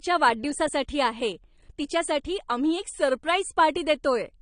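From start to finish the speech sounds dull and smeared, with nothing above about 9.7 kHz, so sibilants lose their bite and pick up a fizzy, watery edge. The likely cause is AAC compression at a low bitrate. The sound points to AAC-LC at around 32 kbps, where the encoder drops the top band and quantises what's left coarsely, leaving that warbling texture on sustained sounds.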